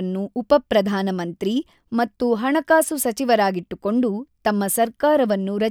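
Nothing in the speech stood out as a technical fault on listening.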